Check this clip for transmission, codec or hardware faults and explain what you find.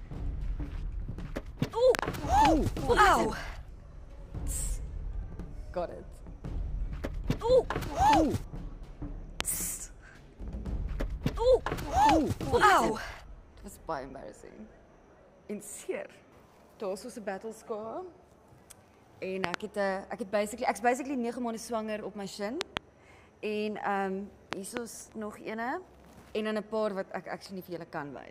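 Loud pops occur five times: at 1.95–2.01 s, 9.41–9.43 s, 19.44–19.56 s, 22.61–22.79 s and 24.53–24.79 s. Each is most likely a sudden voltage step or spike from a plug, switch, static discharge or driver glitch, shaped by the downstream circuitry into a brief pulse. All but the 9.41 s event are double pops. They stand out sharply at about 25 dB above the surrounding sound, about 20 dB for the last, while the sound continues underneath.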